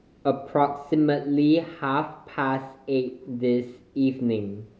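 No technical faults can be heard anywhere in the recording. Nothing in the signal chain intrudes on the speech at any point.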